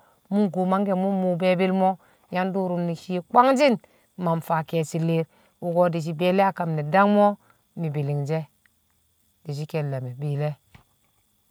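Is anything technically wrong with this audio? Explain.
No, nothing in this recording points to a technical problem.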